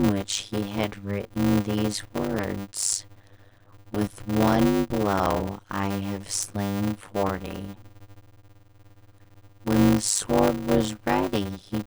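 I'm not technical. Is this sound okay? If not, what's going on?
No. Throughout the clip there's a block size mismatch (padded). Tiny silent gaps fill each audio chunk, causing a steady 100 Hz buzz and speech running at about half speed (0.533×). Unlike a slowed recording, the voice's tone stays the same.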